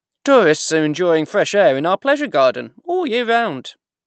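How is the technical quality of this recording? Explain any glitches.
No glitches: the speech comes through without any faults.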